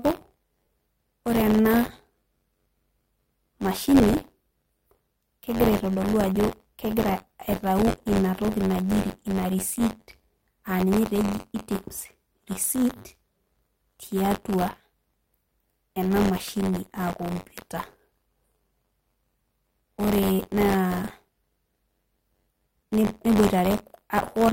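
Buffer tearing runs through the whole speech clip: writer and reader slip past each other every period, splicing in a small slice of audio about 30 ms old, producing a 93.8 Hz rattle that fits a 512-sample buffer and vanishes in silence, unlike steady hum. Lost LE Audio frames hit at 0.65 s and 9.79 s, with 20 ms and 10 ms of missing audio concealed by a brief noisy smear rather than a click or hard gap.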